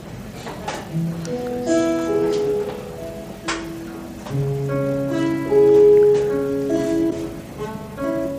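A broken MP3 bit reservoir sounds at 7.09 to 7.12 s as a 30 ms glitch where the audio skips ahead. It likely comes from lost frames: the next frame, about 26.1 ms long, reaches back for borrowed bits and decodes another frame's bytes.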